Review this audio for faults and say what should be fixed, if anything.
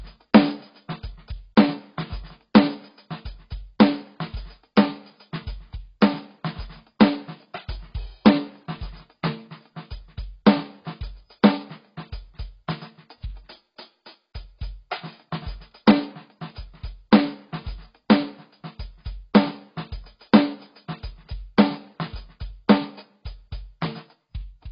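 The music is dull and smeared throughout, with nothing above 5.4 kHz. That's likely heavy AAC compression at a bitrate around 16 kbps, so the encoder dropped the top end. Re-export from the original at a much higher bitrate and it should come back.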